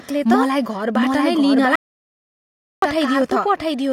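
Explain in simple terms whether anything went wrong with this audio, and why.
Two things went wrong.

First, there is a doubled audio track. The whole clip has a second copy of the speech mixed in, trailing the original by about seven-tenths of a second. The copy is roughly as loud as the original, so everything sounds said twice, like a sharp echo with no fade. Nothing about the room causes this. The likely cause is the same sound being recorded twice through a slower route, or two copies left out of step in editing.

Second, there is an audio dropout to silence. At 1.76 seconds the sound cuts off mid-flow. It returns at 2.82 seconds, after just over a second of dead, total silence with no background hiss at all. Whatever was spoken in that gap is lost. The likely cause is the input briefly failing, through a loose connection, a dropped link or an accidental mute, while the recorder kept writing silence.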